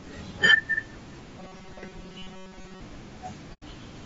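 Low-delay AAC compression is plainly audible across the whole speech clip, and the coding is likely AAC-ELD, the low-delay variant used for video calls. At this bitrate too few bits are left to code the detail between the voice's pitch harmonics, so noise fills the gaps between them, and the result is rough and grainy. The top band sounds lowered and somewhat synthetic. The degree of damage fits a bitrate around 32 kbps.

From 1.39 to 2.81 s comes robotic sound from repeated short buffers. Fresh audio is likely arriving too seldom, so the playback side keeps replaying its most recent short slice while the real signal in between is dropped, roughly two thirds or more of it. Those replays impose a fixed buzz at 188 Hz, which fits a buffer of about 5.3 ms. The voice becomes a stiff, metallic drone that still loosely tracks the syllables.

At 3.53 to 3.63 s there is AAC frame loss with muting, a gap of about 90 ms. 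The decoder zeroed the spectrum of the missing audio, which fits about three lost frames. Because its overlapping windows taper the signal down into the silence and back up afterwards, the dropout sounds like a soft-edged hole rather than a hard cut.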